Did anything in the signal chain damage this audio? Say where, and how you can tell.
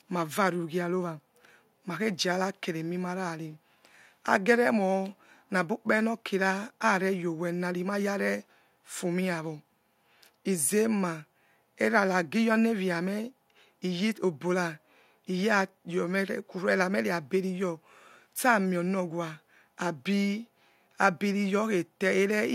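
No, nothing along the way seems to have hurt this speech recording, and I can't pick out any point in the chain where something went wrong.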